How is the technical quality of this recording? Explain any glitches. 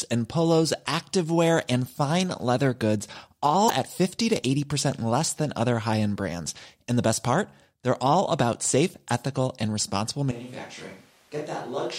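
The recording has two glitches: a brief break a little under 4 seconds in, and an abrupt change of microphone sound for the final stretch.

Broken MP3 bit reservoir, 3.67 to 3.70 s: the speech is briefly disrupted, and the audio skips slightly ahead. This is likely caused by missing MP3 data. The following frame then borrows bits from the wrong frame. The disruption lasts about one 26 ms frame.

Switch to a distant microphone, 10.3 s to the end, right after "safe ethical and responsible": the speech suddenly turns roomy and hollow, with thinner bass. The level drops by about 10 dB, and room noise rises to about 25 dB below the speech. The likely cause is that the close microphone dropped out and a far-off one took over.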